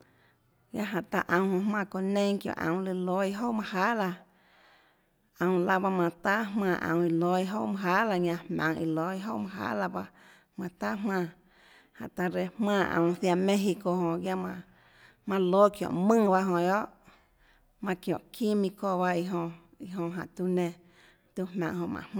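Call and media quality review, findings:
Call and media quality review findings: no faults heard in this speech recording.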